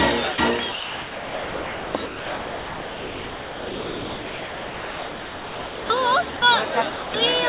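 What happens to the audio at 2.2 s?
At 2.2 s the sound has already dropped out; from 2.06 to 5.9 s it is replaced by steady comfort noise, likely because the voice detector classed it as background. Unlike a network dropout, the filler is smooth and constant rather than silent, glitchy or stuttering.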